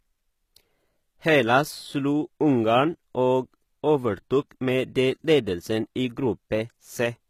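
Throughout, likely HE-AAC compression, at what sounds like about 20 kbps, rebuilds the treble from copied lower bands, so s sounds turn gritty and metallic.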